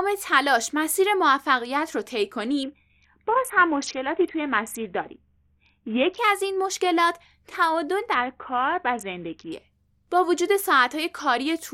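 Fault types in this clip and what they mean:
Bluetooth SBC bit pool drop: from 2.63 to 6.18 s and from 8.14 to 9.52 s the speech dulls and turns gritty, which fits a bit pool cut from 28 to 5, near 54 kbps. Unlike a plain low-pass, coarse quantisation grit accompanies the lost treble.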